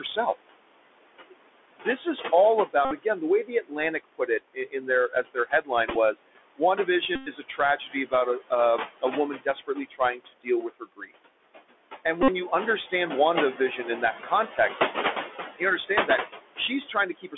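Right from the start, the whole thing sits on a Bluetooth CVSD headset codec, so nothing gets through above about 3.5 kHz or below about 300 Hz. The one-bit up/down coding leaves a grainy hiss under the speech, scratchy s sounds, and plainly audible distortion on loud bright moments. Running alongside are noise suppressor artifacts: the room noise, which sits only about 10 dB under the speech, gets pulled down by about 21 dB in the gaps and swells back under the talking.

From 1.28 to 11.13 s the suppressor also cuts speech it mistook for noise, dipping by up to about 21 dB. Around three seconds of soft consonants and word endings in total come out swallowed.

Inside that stretch the Bluetooth headset packet repeated fault shows up. At 2.85 to 2.94 s, 60 ms of lost audio gets filled by replaying the last packet, which gives a short buzz near 267 Hz. At 5.90 to 5.96 s the losses are scattered in runs of only a few milliseconds, so you hear small ticks. 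The longest one is 7.16 to 7.29 s, with about 109 ms of steady buzz. After that stretch, another 52.5 ms of buzz comes at 12.23 to 12.28 s.

The speech cuts come back at 13.58 to 14.58 s, dipping by about 12 dB over roughly a fifth of a second. The last one runs from 15.59 s to the end, dipping by about 19 dB across nearly half a second of faint, clipped syllables.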